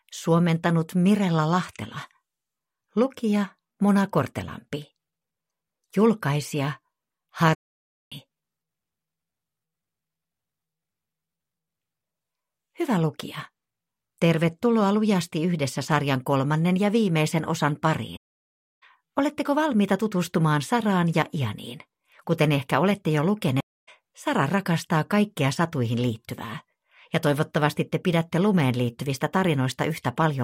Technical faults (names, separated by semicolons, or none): AAC frame loss with muting